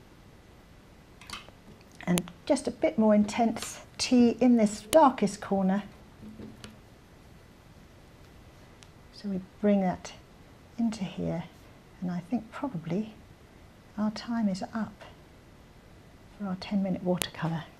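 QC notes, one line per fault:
2.18 s, 4.93 s, 17.22 s: file header played as audio. Joined pieces kept their WAV headers, and those bytes play as samples, giving a click at each join.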